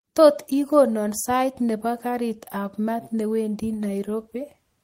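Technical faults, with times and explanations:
Nothing technical goes wrong anywhere in this bit of speech, so there's nothing to list here.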